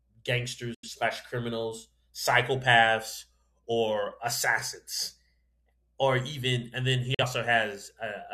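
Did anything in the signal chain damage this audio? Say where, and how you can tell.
Yes. At the broadcast reception stage, the receiver lost frames and muted each time until good frames returned. That is a digital broadcast dropout. The sound fades out in about 3 ms and goes silent from 0.74 to 0.89 s, just before "criminals psychopaths or assassins", and again from 7.14 to 7.24 s, right after "even and then he". The amount of lost audio fits losing whole frames of roughly 43 ms each, two and then one. The audio sent during those holes is gone for good.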